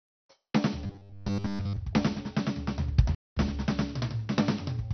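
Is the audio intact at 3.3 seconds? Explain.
No. A playback stall silences the music from 3.15 to 3.37 s, about 220 ms, likely because the player ran out of data or was blocked, then sound resumes. The music is also dull, with a gurgling, granular texture. This is MP2 compression, likely at a low rate near 48 kbps, where upper sub-bands switch off and the rest are coarsely quantised.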